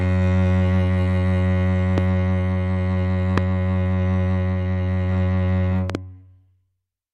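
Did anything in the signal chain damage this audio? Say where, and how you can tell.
Yes. Loud pops hit the music at 1.98–2.00 s and 3.38–3.40 s, each a single sharp pop peaking roughly 15 dB above the music, then a double pop at 5.90–5.97 s about 10 dB above it, with the music continuing underneath. The stage is likely analogue wiring: a plug, switch or static discharge injecting a voltage step that downstream circuits shape into a brief pulse. On a waveform each shows as a tall spike; on a spectrogram, a thin vertical broadband stripe.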